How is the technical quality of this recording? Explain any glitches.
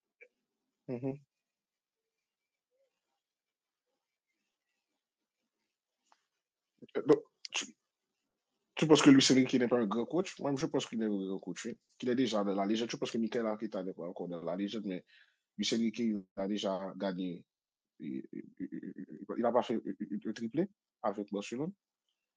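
The recording shows no technical glitches, and its signal remains intact and continuous throughout.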